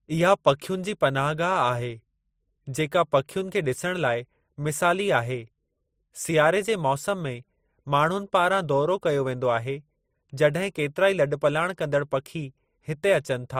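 From start to finish, the speech carries two layers of coding damage at once: a swirly, watery smearing and a dull, band-limited top end with metallic ringing. This is likely transcoding between lossy codecs, a low-rate MP3 pass followed by Opus at a similarly modest rate. Opus spends bits re-encoding the MP3 artefacts and adds its own. A spectrogram shows a hard ceiling from the lower cut-off, with blotchy, flickering high-frequency patches beneath it.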